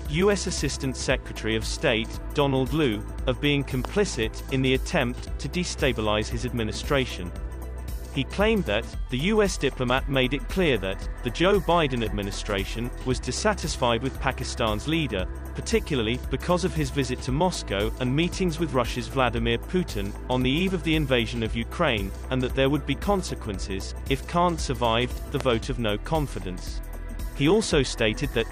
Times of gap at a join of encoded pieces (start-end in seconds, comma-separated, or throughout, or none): none